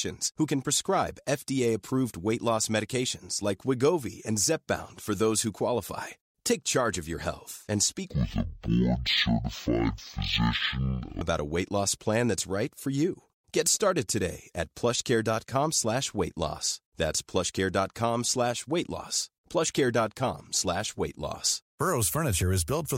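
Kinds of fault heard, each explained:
Stereo read as mono: from 8.10 to 11.21 s the speech drops to half speed and a full 12 semitones lower, because the left and right samples of each frame are played back in sequence as one channel, so every moment lasts twice as long. On a spectrogram the harmonics sit at half their usual height and stretch out in time, with a faint mirrored copy filling the upper half of the band. The waveform looks drawn out.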